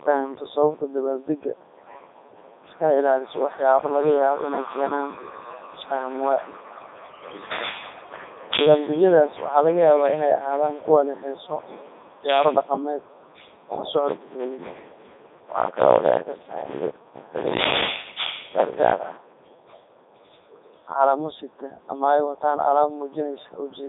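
Robotic, buzzy speech runs through the whole clip, squeezed into a narrow band from about 250 Hz to 3.7 kHz with nothing above 3.8 kHz. This is heavy Codec 2 vocoder damage, consistent with 3.2 kbit/s: the voice is rebuilt from sine waves, discarding the original waveform.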